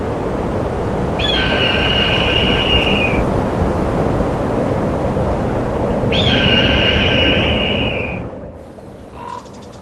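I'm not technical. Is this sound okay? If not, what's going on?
Yes, it sounds fine, and nothing stood out as a problem when listening to it.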